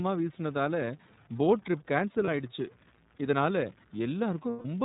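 Distortion runs through the whole clip, and the pauses fill with a gritty noise floor. A stuck bit in the converter or data line is the likely cause.

The speech is also band-limited to about 4 kHz and sounds slightly rough and synthetic throughout. This is iLBC codec coloration, and the sound fits its 30 ms frame mode at roughly 13 kbps.

At 2.24 s, a 30 ms stretch turns into a brief held, buzzy vowel. At 4.50 s, a 150 ms stretch holds and fades the same way. Both are lost iLBC frames, consistent with one missing frame and then five. The decoder repeated the last pitch cycle mixed with noise, and the speech recovers right after each gap.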